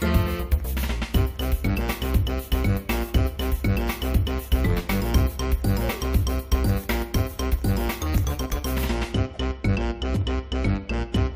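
No technical faults can be heard anywhere in this clip.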